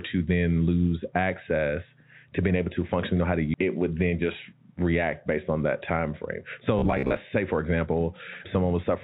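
At 3.54 to 3.56 s the speech jumps forward with no gap at all. It's a skip ahead: a chunk of roughly 0.7 s got dropped while newer audio was already queued, so the two sides butt straight together and that stretch simply never plays.

Right after, from 4.13 to 4.61 s, there's a jitter buffer speed-up. The buffer was holding more than it wanted, so it trimmed tiny pitch-period slices, a few tens of milliseconds in total, and ran at about 106% speed. The pitch stays put but the delivery sounds slightly rushed.

Then from 6.79 to 7.18 s it goes robotic: a rigid, metallic buzz at 66.7 Hz that still loosely tracks the speech. That's likely repeated short buffers, with the last 15 ms or so looped whenever fresh audio arrived late. Something like 40% of that stretch is repeats, which is what stamps the fixed pitch on it. All of this sits on the G.711 mu-law call path, which is why there's nothing above 4 kHz.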